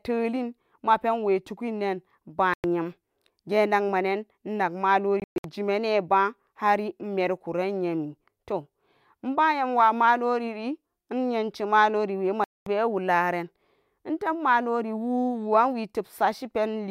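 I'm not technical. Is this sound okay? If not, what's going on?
No. This is most likely a Bluetooth dropout: audio packets reached the headphones too late and were thrown away. The speech cuts to silence, then resumes further along, as if it had kept playing. Gaps: 2.54 s (0.1 s), 5.20 s (choppy, before "jimane ba hari imerikuran"), 12.44 s (0.22 s, before "wularen intub").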